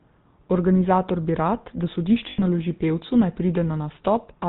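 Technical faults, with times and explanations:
Throughout: GSM full-rate codec. Everything above 4 kHz is gone, and the pulse-driven vocal-tract model leaves a plainly buzzy, gravelly roughness, which fits the 13 kbps full-rate coder.
2.30–2.43 s: lost GSM frames. Right after "bi rad da", the last good frame is repeated for about 80 ms, giving a rough metallic ring before "naloži pevcu naj".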